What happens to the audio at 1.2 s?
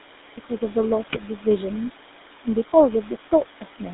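At 1.2 s the audio is at the tail end of a burst of GSM bit errors running from 1.08 to 1.21 s. Corrupted bits reached the speech decoder, so the parameters it rebuilt were wrong, and the span sounds like roughly six 20 ms frames damaged in a row. The speech breaks up there into squawking, popping and gargling.

Underneath that, the whole clip passes through the GSM full-rate codec, and its character fits the 13 kbps full-rate coder. The codec models the vocal tract and drives it with a thinned-out pulse excitation, so the speech has a plainly audible buzzy, gravelly roughness. The line band sits at about 250 Hz to 3.7 kHz, which strips out the brightness above that range and the lowest bass below it.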